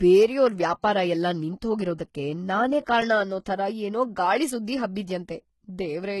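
Throughout the clip, the speech carries heavy codec damage, likely from HE-AAC compression. Nothing is present above 11.8 kHz. The damage points to a low bitrate, around 16 kbps. At that rate only the lower spectrum is truly coded. The treble is rebuilt by spectral band replication, which copies lower bands upward and shapes them with a coarse envelope. Its harmonics do not line up with those below. So s sounds turn gritty, metallic or lispy.

At 0.82 s there is pre-echo, spread over about 18 ms. A sharp attack landed late in a transform block. The codec spread its quantisation noise across the whole block. Noise sized for the loud onset also filled the quiet moment just before it. The result is a brief hiss ahead of the attack. The attack itself sounds soft and smeared.

At 3.01 s, just before "ಅನ್ನೋ ಥರ ಏನೋ ಗಾಳಿ", comes a block of digital silence lasting 8 ms. The audio drops to silence and returns with no fade. 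That points either to an output buffer not filled in time, or to a calculation that produced invalid numbers. The gap is far shorter than 15 ms. So it is not heard as a pause. It comes across as a tick or a dip.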